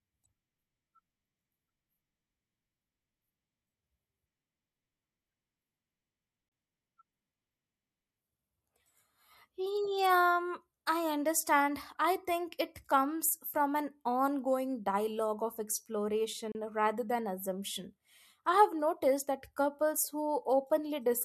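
A gap at a join of encoded pieces opens in this speech clip at 6.49 to 6.52 s and again at 16.52 to 16.55 s, just before "rather than assumption I". Each is a silence of about 31 to 32 ms with edges smeared by the codec, after which the speech resumes where it stopped. The 10 s spacing points to separately encoded segments joined untrimmed, each keeping its encoder's leading delay and padded final frame.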